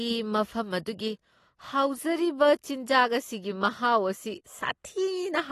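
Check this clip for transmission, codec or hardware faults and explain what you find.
One codec fault runs through the whole speech clip: AAC compression is the likely cause. Nothing is present above 12.4 kHz, and the damage is plainly audible as a dull, smeared texture with a watery warble on sustained sounds and a fizzy edge on sibilants, which fits AAC-LC at a low bitrate around 32 kbps. The encoder quantises frequency lines against a hearing model, dropping and patching bands it deems masked. Unlike a simple low-pass filter, which only removes the top, this leaves the remaining spectrum shifting and granular.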